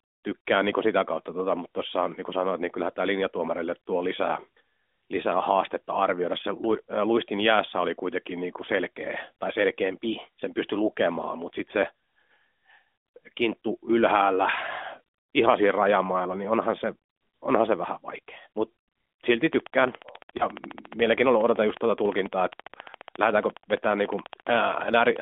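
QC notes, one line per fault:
20.38–20.46 s, lost AMR speech frame: one 20 ms frame failed its checksum, so the decoder reused the previous pitch and vocal-tract settings at lowered gain. This is heard as a brief dip or warble in the narrowband speech, which is confined to roughly 250 Hz–3.5 kHz.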